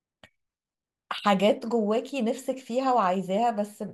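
Sharp single clicks at 1.18 s and 3.04 s in the speech are most likely dropped samples: a tiny fraction of a millisecond missing, so the waveform jumps abruptly.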